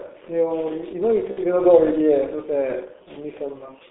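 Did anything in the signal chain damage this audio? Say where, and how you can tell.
Yes. The G.723.1 codec damaged the whole clip at the codec stage. The speech is confined to a narrow telephone band of about 300 Hz to 3.6 kHz, and it sounds muffled and hoarse with smeared consonants. The damage is heavy, which fits a low rate of roughly 6.3 kbit/s. At that rate the codec keeps only a coarse, slowly refreshed model of the voice in 30 ms frames, so fine spectral detail and fast transitions are lost.

VoIP packet loss concealed by the speech codec occurs from 1.31 to 1.39 s, at the network stage. The speech briefly turns into a stretched continuation that fades instead of cutting to silence. That gap is consistent with two lost 30 ms frames, about 60 ms of audio. The decoder filled the hole by repeating its last pitch and spectral envelope with falling gain, then had to rebuild its state once packets resumed.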